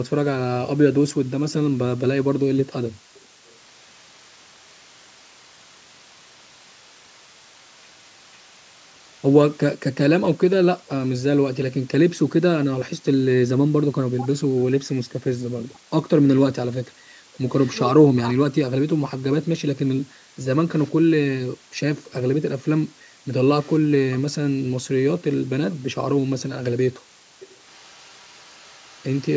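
A speech recording with a steady, even hiss throughout, from low bit depth with dither, which fits 8-bit audio; a spectrogram shows a flat noise floor roughly 25 dB below the signal, up to the empty band above 8 kHz. An echo leak adds a faint repeat of the voice, about half a second late, from 3.14 to 9.58 s, 17.5 to 17.75 s, 20.76 to 20.91 s, 23.6 to 24.21 s and 27.4 to 29.35 s, likely residual loudspeaker echo that the canceller missed. It appears as weak shadowed copies of the speech harmonics, shifted 499 ms later. Speech is suppressed in double talk from 13.68 to 17.03 s and 18.02 to 19.16 s, likely from the echo canceller ducking the talker while the far side spoke. The waveform shows the voice dropping in chunks by as much as about 40 dB.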